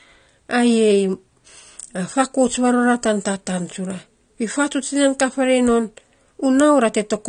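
From start to finish the speech sounds dull and smeared, with a warbling, fizzy edge on sibilants and held vowels. This is likely AAC compression: the coder quantised each frame's frequency lines too coarsely and dropped everything above 9.8 kHz. The plainly audible damage fits a low bitrate near 32 kbps. On a spectrogram the energy stops at a hard ceiling around 9.8 kHz.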